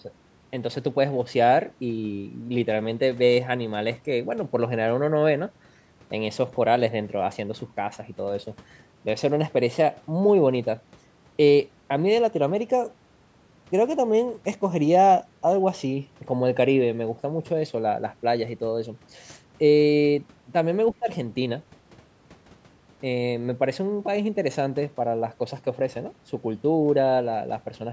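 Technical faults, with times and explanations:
20.92–21.08 s, speech suppressed in double talk: the speech dips sharply for about 150 ms, falling by roughly 20 dB at its deepest before it recovers. The likely cause is an echo canceller caught with both sides talking at once. It could not tell the near talker from the loudspeaker echo. So it turned everything down together. The short hole sits in speech that, as with all of this call-processed audio, carries nothing above 8 kHz.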